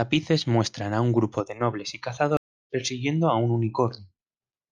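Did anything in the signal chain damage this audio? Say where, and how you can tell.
Yes. A stream reconnect at the network stage: the connection dropped and the player restarted a fresh decoder mid-stream. After "grupo de nobles y" the sound cuts to silence from 2.37 to 2.70 s, then resumes at "a un" roughly 0.3 s later in the stream, skipping that stretch.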